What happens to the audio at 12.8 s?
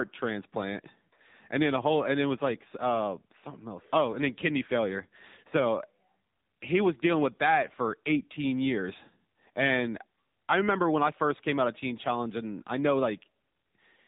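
At 12.8 s the speech carries the same AMR narrowband mobile codec damage heard throughout the clip. Nothing above 4 kHz survives, and the vocal-tract model, driven by sparse pulses in each 5 ms, makes the voice plainly buzzy and synthetic, which points to a low bitrate near 8 kbps.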